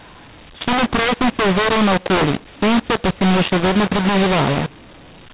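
All the way through, the speech suffers a mu-law and A-law mix-up: A-law telephone audio decoded as mu-law, so levels scramble, speech sounds harsh and gritty, and pauses hiss.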